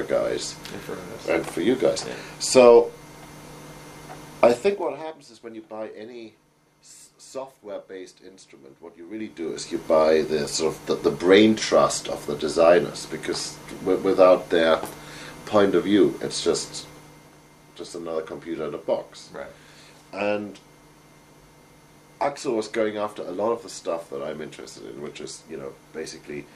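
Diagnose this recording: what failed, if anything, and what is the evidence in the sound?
Zipper noise at 4.46 to 5.11 s and again at 9.10 to 9.85 s, arising in the gain stage of the buffer processing. In the first stretch the level falls by roughly 20 dB in 3 dB steps; in the second it climbs by roughly 20 dB in 2 dB steps, both at about ten steps a second. Each unsmoothed jump leaves a small click, so a ticking texture rides on the sound while it moves.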